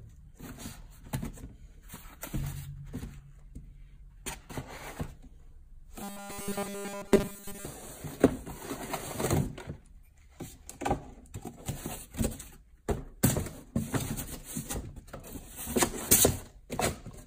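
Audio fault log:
6.03–7.65 s, robotic sound from repeated short buffers: the audio becomes a rigid metallic buzz pinned at 200 Hz, likely from a 5 ms chunk looped over and over while fresh audio is skipped. Unlike a dropout, nothing falls silent; the steady repeat rate sets the pitch.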